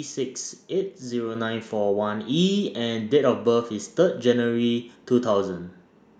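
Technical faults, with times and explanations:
1.35 s, microphone volume stepped up: the call software judged the input too quiet and raised the microphone gain in a single step of about 5 dB, so speech and background noise jump louder together. The waveform envelope widens abruptly there, and the spectrogram brightens evenly across all frequencies.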